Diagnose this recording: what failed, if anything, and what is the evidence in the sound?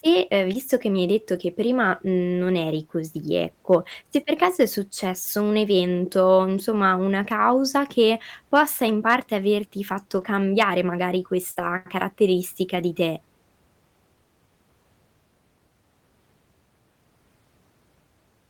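Network and codec, lost packet rebuilt from error correction: single 20 ms packets at 0.53–0.55 s, 1.35–1.37 s (right after "che mi hai detto", before "che prima mhmm non") and 3.91–3.93 s (just before "se per"), plus longer runs at 10.17–10.23 s (40 ms, two packets), 11.55–11.69 s (80 ms, four packets) and 12.75–12.81 s (40 ms). The speech never drops out, but these spots turn grainy and noisy. The decoder played the low-bitrate redundant copies carried in the following packets. On a spectrogram each spot shows smeared, coarser harmonics, with no silent gap.

Sample-format or converter stage, hard clipping: brief overloads at 3.72–3.75 s, 8.55–8.60 s and 9.08–9.15 s, about 2 dB over full scale, and a harder one at 10.61–10.63 s, about 4 dB, just after "averti fatto". Each is a short crackle on a loud peak. The waveform shows flat-topped plateaus where the peaks hit the ceiling. The spectrogram shows thin vertical streaks of added harmonics reaching high into the spectrum at those instants.

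Network, short concealed packet loss: at 11.51–11.57 s, 40 ms of audio arrived too late to decode. The receiver extrapolated the preceding sound and blended back in, which leaves a brief smeared wobble. That slips straight into the 80 ms error-correction rebuild, so the whole stretch sounds rough. On the spectrogram the fill shows as a frozen continuation of the preceding sound that doesn't track the surrounding speech, with a soft seam where real audio resumes.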